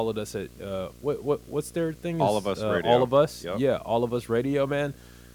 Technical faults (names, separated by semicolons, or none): video or display buzz